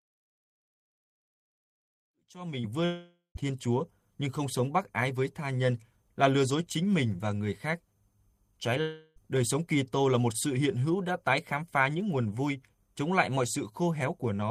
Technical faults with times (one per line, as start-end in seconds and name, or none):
2.85-3.37 long network dropout
8.81-9.18 long network dropout